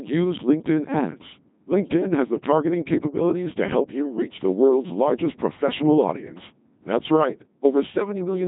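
From start to finish the speech sounds robotic and buzzy, with a synthetic, metallic edge and a dull top where nothing sits above about 3.8 kHz. This is the Codec 2 vocoder at heavy damage, consistent with a rate near 2.4 kbit/s. Rather than keeping the waveform, it sends only pitch, voicing, energy and a coarse spectral envelope, and the decoder rebuilds the voice from sine waves, which produces that mechanical buzz throughout.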